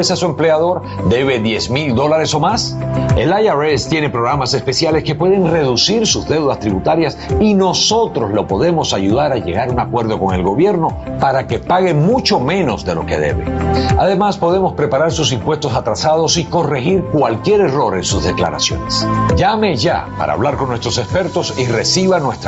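Gain pumping runs throughout: the gain swings by around 15 dB, dropping under each loud sound, likely from a fast limiter. On the waveform, the envelope looks flattened and squashed.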